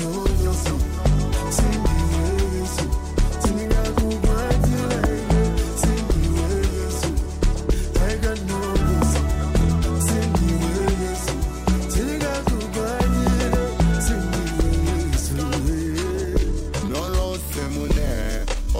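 From 15.8 s to the end at 18.8 s, the audio runs at about 0.69 times its normal pace with pitch unchanged, a time-stretched section, likely from software lengthening it to fill a slot. Repeated short fragments make it drag.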